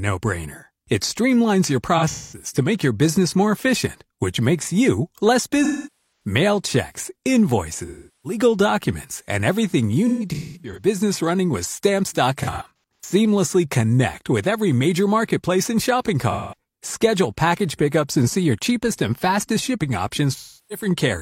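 AAC frame loss with concealment breaks up the speech seven times, at 1.97–2.46, 5.64–6.30, 7.86–8.39, 10.08–10.87, 12.43–13.14, 16.31–16.55 and 20.34–20.86 s. Each gap runs from 213 to 512 ms. At 1.97, 10.08 and 12.43 s it arrives as scattered bursts, none longer than about a fifth of a second. The decoder replays the last intact spectrum with noisy phase, so each patch sounds smeared and hissy. On a spectrogram these show as blurred, stretched columns with the last harmonic pattern held frozen. The waveform shows a smoothed envelope there.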